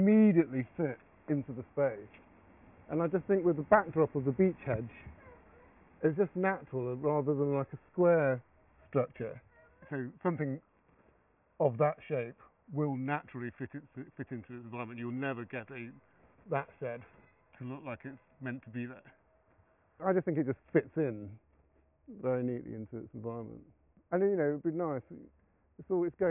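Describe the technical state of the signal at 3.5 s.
At 3.5 s the signal is intact, with no audible technical fault at that moment.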